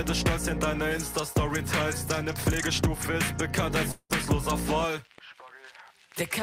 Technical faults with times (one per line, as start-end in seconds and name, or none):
3.91-4.12 long network dropout